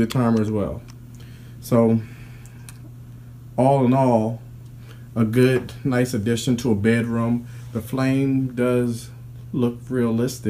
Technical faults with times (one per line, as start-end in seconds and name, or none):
none